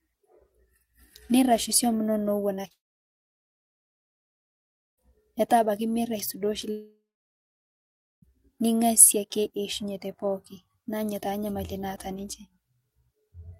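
At 2.55, 2.61 and 2.68 s, short concealed packet loss: three 20 ms gaps of the speech are patched by extending the preceding sound, leaving brief smears. From 2.72 to 4.99 s, a long network dropout follows: concealment fades into about 2.2 s of silence, likely from lost packets. From 6.71 to 8.24 s, a second dropout leaves roughly 1.2 s of silence.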